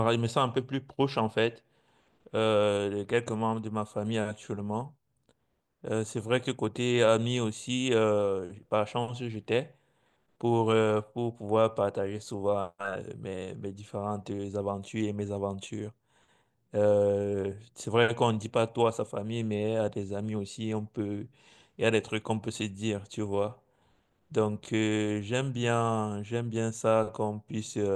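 No technical faults can be heard anywhere in the speech. Nothing in the recording calls for a timestamp or comment.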